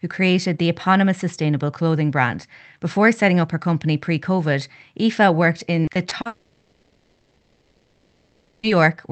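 From 5.85 s to 6.27 s, packets in the call stream went missing four times in quick succession. The receiver patched each hole, the longest about 40 ms, by stretching out the sound just before it. This repeated packet loss leaves about a quarter of that span concealed, so the speech turns choppy, with pieces missing. The narrow, roughly 8 kHz band of the Opus call path, which fits a 24 kbps setting, runs throughout.

At 6.27 s the speech stops and does not return until 8.66 s. In its place the last sound is drawn out into a buzz or hiss that fades to a low steady noise rather than true silence. The likely cause is a long network dropout, in which about 2.4 s of audio never arrived and was filled by concealment. When the speech returns, it picks up further on, and the missing stretch is simply gone.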